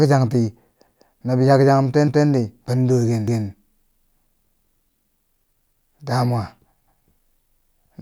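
The speech stutters at 0.88, 2.08, 3.28, 4.48, 5.68 and 6.88 s. These are overlapping chunks. The audio was handled in 1-second blocks. Each block restarted 200 ms early, so that slice plays twice. Each join gives a brief, regular stutter.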